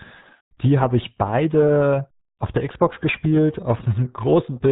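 RealAudio 14.4 codec damage runs throughout: this low-rate speech coding, consistent with about 8 kbit/s, strips everything above 3.8 kHz, leaving the speech muffled and gargly.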